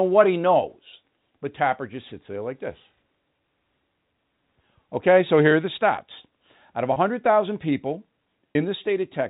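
At 6.93 s and again at 8.52 s the speech briefly hangs on a held, buzzy tone for about 30 ms before carrying on. This is packet loss with pitch repetition. Each gap fits a single lost packet, which the receiver concealed by repeating the last pitch period until fresh audio arrived. The gaps are short, so the repeated cycle holds the sound rather than fading to silence. The G.711 telephone coding limits the band to 4 kHz throughout.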